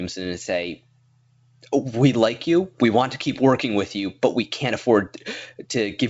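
No technical faults are audible.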